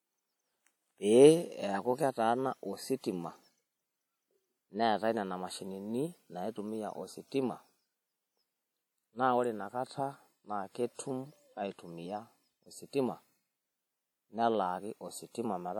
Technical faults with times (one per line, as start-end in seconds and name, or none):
0.00-15.79 WMA compression